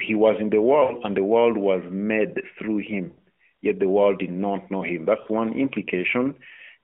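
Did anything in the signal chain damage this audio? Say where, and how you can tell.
Yes: lost AMR speech frames, a network fault. The speech stretches out and fades after "was in the" (0.84–0.94 s), "world was made through" (3.08–3.20 s) and "did not know him" (5.22–5.28 s). The decoder repeated the last good pitch and vocal-tract settings at falling gain, which fits runs of two to five 20 ms frames.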